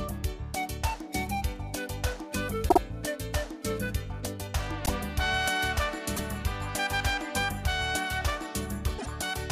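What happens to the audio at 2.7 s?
At 2.68 to 2.78 s there are repeated frames. A 52 ms block plays twice more, which fits two compressed frames being resent. It stutters and adds about 105 ms.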